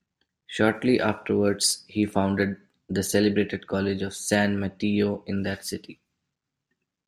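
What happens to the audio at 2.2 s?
At 2.2 s the speech carries clock slip clicks, a soft rattle lasting from 0.13 to 7.04 s. Two unsynchronised clocks likely drift about 500 ppm apart, slipping one sample roughly every 40 ms. Unlike random crackle, the ticks keep an even rate.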